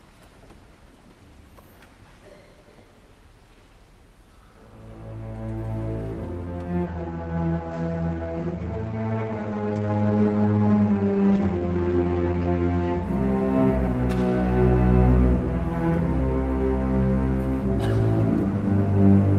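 From 6.89 to 13.09 s a call bitrate drop sets in, the coarse, watery sound pointing to roughly 32 falling to 12 kbps. The top band narrows from 20 kHz to 8 kHz. There are no gaps, as packet loss would leave, and the rough texture sets it apart from plain filtering.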